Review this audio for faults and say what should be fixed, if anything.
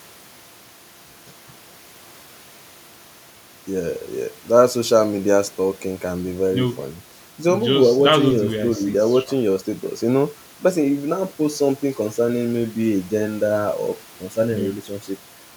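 Nothing in this speech recording needs fixing, as no faults can be heard at any point. No change to the recording or playback chain is called for.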